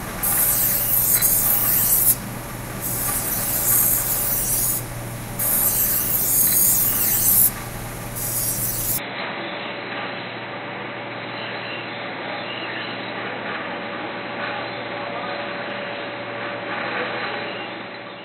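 Sounds that abruptly go dull, about 5 dB quieter and faintly noisier at 8.98 s, cut off above 4 kHz with no gap: likely the input switched to a poorer device.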